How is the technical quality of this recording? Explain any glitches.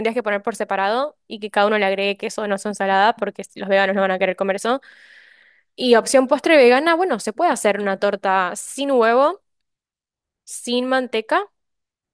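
No glitches turn up in this recording, so there's nothing to explain here.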